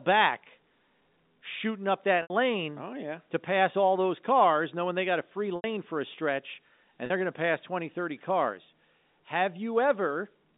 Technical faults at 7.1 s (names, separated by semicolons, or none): packet loss with pitch repetition